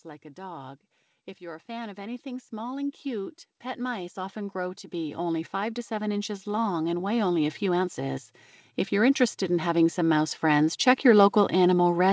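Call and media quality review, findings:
Automatic gain rising, 1.38–8.26 s (about +15 dB) and 8.96–12.06 s (about +5 dB). AGC ramps gain slowly; background swells with the speech, unlike a talker moving closer. Band stops near 8 kHz, as expected of G.722.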